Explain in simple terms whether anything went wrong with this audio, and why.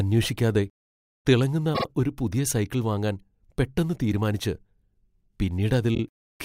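The speech stutters twice because of repeated frames. A short piece of compressed audio was stored or sent more than once, so the player replayed it. At 1.74 to 1.85 s, just before "ഒരു പുതിയ സൈക്കിൾ വാങ്ങാൻ", a 48 ms piece plays two extra times. Its length fits about two frames. At 5.94 to 5.99 s, a 24 ms piece repeats twice more. Together they make the clip about 0.14 s longer.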